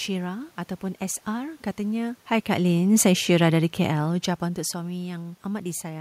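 Speech clip with automatic gain falling: from 1.82 to 4.18 s the gain control eases down by about 3 dB, so the voice and the room noise sink together, unlike the talker's own level shifts around 2 and 4 s.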